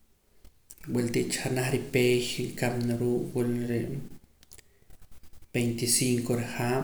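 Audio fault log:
No faults found in the speech recording; nothing to log.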